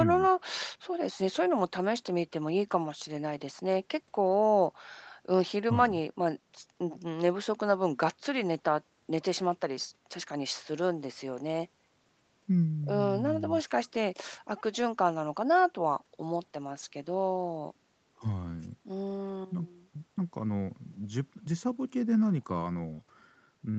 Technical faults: none

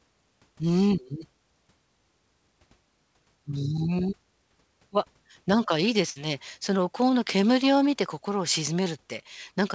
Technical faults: burst of packet loss

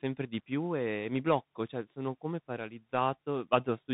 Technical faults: Bluetooth CVSD headset codec

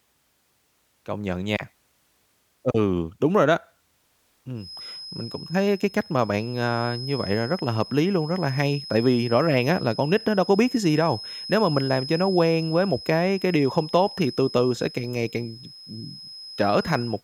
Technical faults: feedback whistle

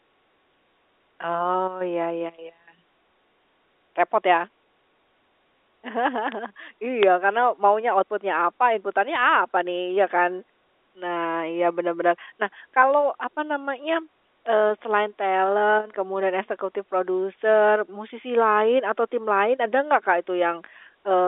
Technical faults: bit error spike; bit errors on a digital phone line

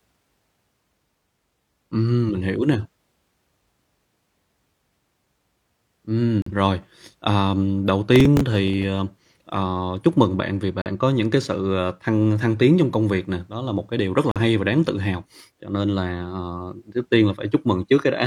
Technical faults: corrupt frame muted; processor overload crackle

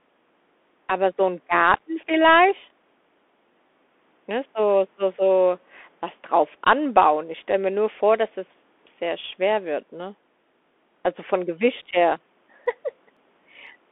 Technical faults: Bluetooth CVSD headset codec; periodic USB or driver dropouts

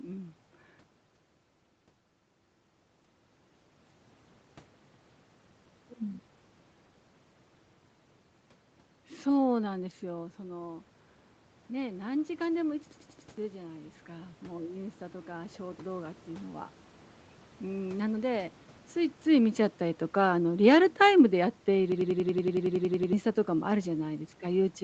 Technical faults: system hang loop; automatic gain rising

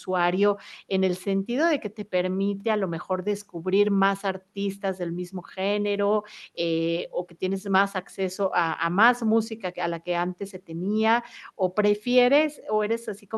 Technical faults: none

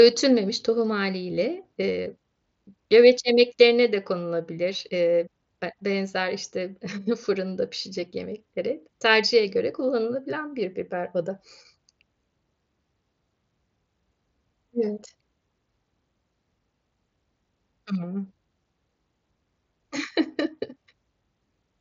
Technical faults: none

